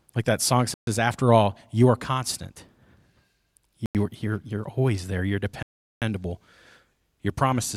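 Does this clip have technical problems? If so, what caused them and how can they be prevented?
Yes. The speech drops to complete silence three times: 0.74 to 0.87 s (about 130 ms), 3.86 to 3.95 s (90 ms), and 5.63 to 6.02 s (nearly 0.4 s). These gaps are likely Bluetooth stalls, where radio interference delayed packets until the headphones' buffer emptied. A concealment dropout fills the gap with smeared or buzzy sound. Here each gap is true silence, and the audio simply resumes afterwards. Keeping the phone close to the headphones, with a clear line between them and away from busy 2.4 GHz Wi-Fi, prevents these stalls.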